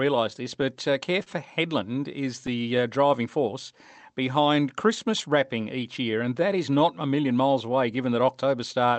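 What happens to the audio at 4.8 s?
At 4.8 s the audio falls inside a stretch of scattered short gaps, from 4.02 to 5.26 s. About four small holes appear there. The receiver filled each by carrying the last sound forward, about 20 ms in all, the longest only a few milliseconds. They come through as brief ticks or smears.

Underneath runs clock drift between sender and receiver. The sender's clock is roughly 3% slow, so the jitter buffer keeps draining. To keep pace, the receiver repeats short pieces.

Those repeated timing corrections run from 0.20 to 8.87 s, including this moment. Playback sits at 98% speed, stretching the sound by roughly 200 ms overall. Each edit is tiny and unevenly spaced. At most they are heard as slight hiccups or a wavering tempo.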